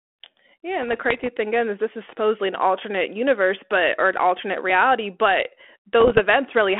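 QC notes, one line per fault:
0.82–1.29 s and 6.00–6.20 s, bit errors on an ADPCM link: pops and rough, gritty bursts with brief jumps in level, first just before "thing again is this", then right after "an alternate reality but". The error rate is low, well under one percent, with the second burst denser. Each flipped bit throws off the decoder's adaptive step size and predictor, so the damage smears for milliseconds rather than clicking once, over a 250 Hz–3.4 kHz telephone band.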